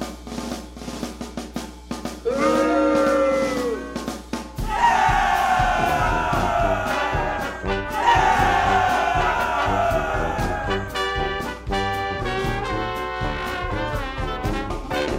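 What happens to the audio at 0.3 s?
Mains hum is present at 0.3 s, as it is across the whole clip. Power-line energy is leaking into the signal path, most plausibly through a ground loop or a nearby transformer, and it shows up as a steady low tone at 60 Hz with a few low harmonics stacked above it. It sits roughly 20 dB below the wanted audio, as a constant drone underneath the sound.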